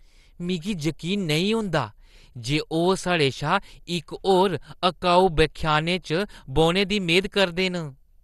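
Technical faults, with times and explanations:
Throughout: MP2 compression. The speech has likely passed through an MPEG Layer II encoder starved of bits, at a rate that points to around 64 kbps. With too little data to share among its 32 sub-bands, the encoder shut off the top bands entirely, leaving nothing above about 12.2 kHz, and quantised the remaining bands coarsely. The result is a dull, muffled top end with a plainly audible gurgling, granular roughness on the speech.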